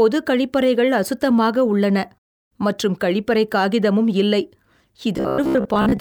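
From 5.17 to 6.00 s, audio likely arrives too seldom, forcing repeated short buffers about half the time: robotic sound, a rigid, metallic 66.8 Hz buzz.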